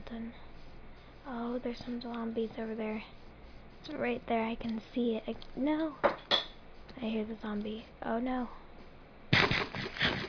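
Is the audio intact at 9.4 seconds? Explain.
Yes, at 9.4 seconds the audio plays through without any dropout, click, distortion or other fault.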